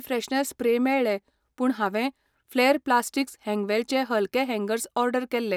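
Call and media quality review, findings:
Call and media quality review findings: none to report for this speech.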